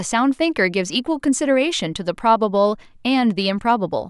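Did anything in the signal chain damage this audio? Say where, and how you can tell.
No, nothing in the chain audibly damages this speech recording, and the signal arrives intact at every stage.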